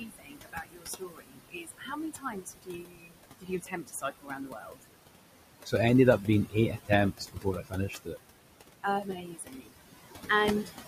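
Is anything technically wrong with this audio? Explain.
Yes, two related problems. Throughout, there are noise suppressor artifacts. The suppressor is pulling what it judges to be steady noise down by about 20 dB, band by band. So the background, sitting about 10 dB under the speech, dips in the gaps and swells beneath the talking.

There's also speech cut by the noise suppressor at 0.0–3.2 s, 3.4–4.84 s, 6.5–6.9 s, 7.12–8.17 s and 9.03–9.73 s. It's mistaking quieter speech for noise and turning it down with the background, by about 17 to 22 dB at worst. Soft consonants and endings get swallowed, worst in the first three seconds or so.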